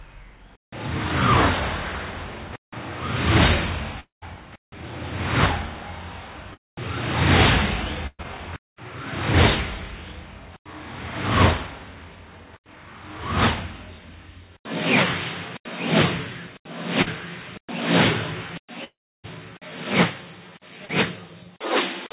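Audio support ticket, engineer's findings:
Long network dropout, 4.00–4.24 s and 18.84–19.26 s: about 0.22 s and 0.4 s lost. The fading fill gives way to silence (about 0.14 s, then 0.31 s). Likely cause: network stall upstream of the jitter buffer.

Short concealed packet loss, 6.54 s, 17.02 s, 20.86 s: brief smear or wobble. About 40 ms missing each time, bridged by the decoder continuing the prior sound, then crossfading back.

Burst of packet loss, 8.07–8.21 s: about 120 ms gone. Concealment extends the last sound while attenuating, ending in about 40 ms of silence. The audio resumes further on, with that span dropped.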